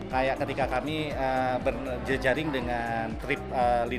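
From 0.02 to 0.77 s a train of clicks ticks over the sound: roughly four sharp pops at about 4 per second, unevenly spaced, peaking around 10 dB above the surrounding audio. The similar shape of each pulse points to something injecting the same brief spike repeatedly, likely electrical interference or a struggling interface. On a waveform they show as thin isolated spikes; on a spectrogram, as narrow vertical lines spanning the whole frequency range.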